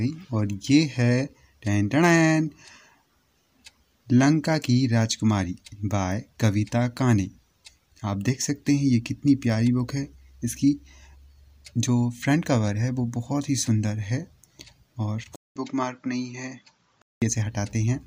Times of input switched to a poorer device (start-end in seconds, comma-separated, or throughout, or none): 15.36-17.22